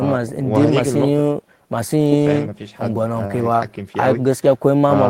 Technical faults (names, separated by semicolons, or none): none